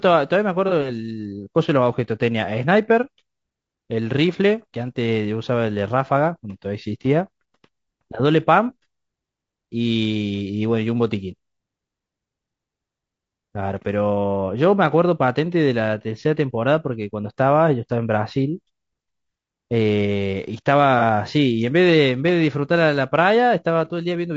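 From the start, the speech sounds rough and grainy. Noise fills the gaps between the harmonics, and the top band sounds thin and synthetic. The damage is plainly audible for all 24 seconds. The likely cause is low-delay AAC compression of the AAC-ELD kind. Its short frames resolve pitch harmonics poorly, and they cost bits. The level of damage fits a low bitrate of around 32 kbps.

At 0.68 to 0.72 s there is a brief smeared, noisy patch. This is AAC frame loss with concealment. About 30 ms of audio went missing. The decoder filled the hole by reusing the last good spectrum. The result is a short phasey blur rather than a gap. The same thing happens again at 20.99 to 21.03 s. It is another 30 ms loss, patched over the same way.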